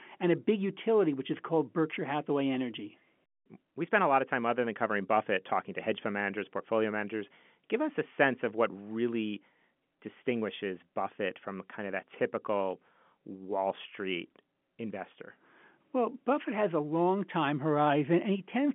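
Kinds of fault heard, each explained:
No faults can be heard in the speech. It comes over a G.711 telephone line, so the sound sits roughly between 150 Hz and 3.4 kHz, with nothing above about 3.7 kHz.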